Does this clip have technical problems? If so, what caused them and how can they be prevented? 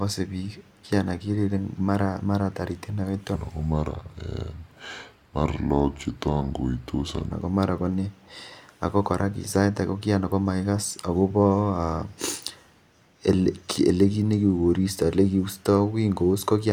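Yes. From 3.35 to 7.32 s the speech drops about four semitones and drags: a section at the wrong speed, playing at 0.79x, likely from a mismatched clock. Keep sample rates consistent across every editing, conversion and playback stage so no section is played at the wrong rate.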